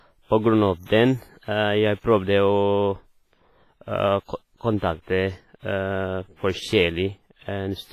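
WMA compression runs through the whole speech clip, with heavy transform-codec damage that fits a bitrate near 24 kbps. Long-block quantisation smears noise across tens of milliseconds, giving a ringing, washy hiss that breathes with the speech, and nothing remains above 15.5 kHz. Likely cause: WMA encoding.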